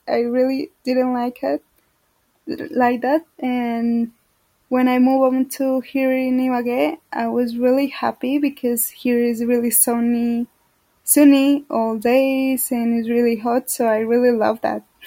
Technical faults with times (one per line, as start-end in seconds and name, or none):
none